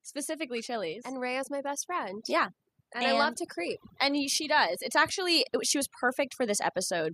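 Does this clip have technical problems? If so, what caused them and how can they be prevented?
Yes. Overdone noise removal runs throughout: an over-strong noise reducer cuts bands near its noise estimate, leaving twinkling specks in near silence and quiet parts of the voice cut away. Use a gentler reduction setting, or record in a quieter space so little cleanup is needed.

Automatic gain rising from 0.25 to 4.62 s: the gain control judged the input too quiet and slowly raised voice and background together by about 8 dB. Set a fixed input gain with automatic gain control disabled before recording.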